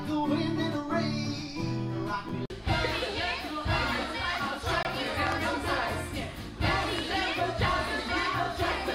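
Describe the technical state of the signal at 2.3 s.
A block of digital silence at 2.29 s: for about 6 ms the signal drops to silence, most likely because the output buffer was not filled in time. The signal cuts out and returns without any fade, so this short a gap is heard as a single tick.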